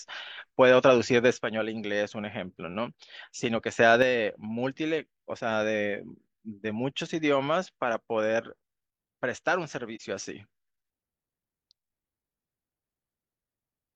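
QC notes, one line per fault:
1.38–3.78 s and 4.02 s to the end, one channel drops out: a stereo channel was likely lost, so the mono sum of the speech falls abruptly by about 6 dB.
9.95–10.01 s, AAC frame loss with muting: the decoder zeroed the lost spectrum, leaving a brief 43 ms dip, which fits a single lost frame, faded by overlapping windows.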